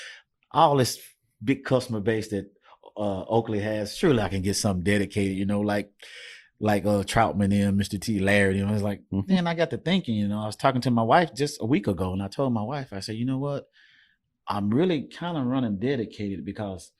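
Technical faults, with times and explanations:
The speech signal shows no technical faults at any point in the recording.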